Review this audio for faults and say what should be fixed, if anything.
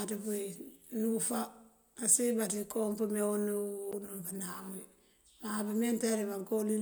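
CD skip at 3.92 s: the laser jumped spiral turns, leaving a brief mute and tick, a flat waveform gap and vertical spectrogram stripe. Re-rip the disc with a secure, error-checking ripper after cleaning it, with the drive isolated from knocks.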